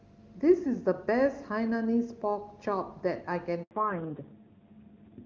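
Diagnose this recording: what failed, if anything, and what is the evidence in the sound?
At the network stage, a handover gap occurs: while the call switched links, no speech frames arrived for 80 ms, from 3.63 to 3.71 s. The speech quickly dies away into silence for that span, and whatever was said inside it is simply gone.

At the codec stage, the call undergoes a fallback to narrowband right after the gap. From 3.71 s to the end, nothing sounds above 4 kHz, replacing the clear HD Voice band heard earlier. The speech turns muffled and rougher, consistent with a low-rate narrowband AMR mode.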